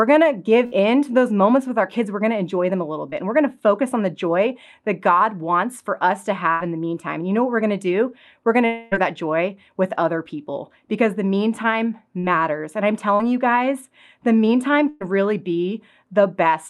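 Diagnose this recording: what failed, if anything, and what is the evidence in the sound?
The network stage failed repeatedly. In three places a burst of packet loss shows up as a held buzz or fading hiss that replaces real audio: 0.65–0.74 s (about 60 ms lost), 6.52–6.62 s (about 80 ms) and 14.89–15.02 s just after "you guys the meantime" (about 120 ms). The decoder kept extending the last sound while turning it down, then resumed further along. The stretched, decaying tone separates this from a plain dropout to silence.

Short concealed packet loss is smaller and blends in. It appears at 3.10–3.14 s after "enjoy them a little" (about 20 ms missing), at 12.19–12.25 s after "people because the meantime", and at 13.15–13.21 s (about 40 ms each). Each is a brief smear or wobble where the receiver patched a few hundredths of a second from the preceding pitch or noise and crossfaded back.

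At 8.66–8.93 s roughly a quarter-second of audio is gone. The gap is filled entirely by a continuation of the previous sound that sags away, and it never reaches true silence before the audio returns further on. This fits a long network dropout, likely a stall in packet delivery. It is longer than the bursts, but it never decays into quiet, so it sits at the short end of that category.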